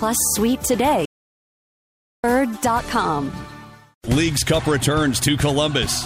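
At 1.05 s the sound cuts off mid-flow and stays silent until 2.24 s: a playback stall of 1.18 s, likely from the player running out of data or its thread blocking. The waveform flatlines there, and the spectrogram shows an empty band across all frequencies.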